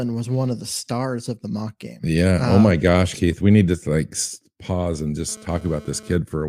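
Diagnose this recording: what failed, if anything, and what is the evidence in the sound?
A GSM phone buzz enters at the analogue stage, from 5.29 s to 6.16 s: a hard, raspy buzz at about 217 Hz, roughly 23 dB below the speech. A nearby 2G handset's bursty radio transmissions are being rectified in the audio circuitry. Its short, patchy appearance fits a data transfer. A spectrogram would show a dense comb of harmonics stacked at 217 Hz spacing, and the waveform a regular pulse train riding on the speech.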